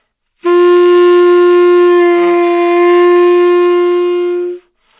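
Aliasing runs through the whole clip. The sound points to a drop to an 8 kHz rate without a proper low-pass first. Content above 4 kHz folds back below it as false tones, faint but gritty and metallic, crowding the band edge.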